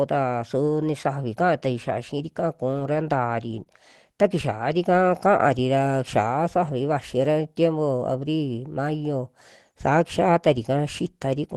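From 3.51 to 3.61 s three separate packets in this Opus call never arrived, but each following packet carried a low-bitrate backup copy, so the decoder played those instead. This is lost packet rebuilt from error correction. The 60 ms stretch has no gap but turns grainy and noisier, on a path whose band reaches about 12 kHz.

Right after, from 3.63 to 3.67 s, about 20 ms of audio missed the decoder entirely, with no backup to fall back on. This is short concealed packet loss. The receiver extended the preceding sound to fill the hole and then blended back into real audio, which produces a brief smear or wobble.

The same error-correction repair happens twice more as single 20 ms patches, at 5.37 to 5.39 s and 6.67 to 6.69 s. Each is a short flash of grit. The coding noise of the call path, which fits a stream of about 24 kbps, is present throughout.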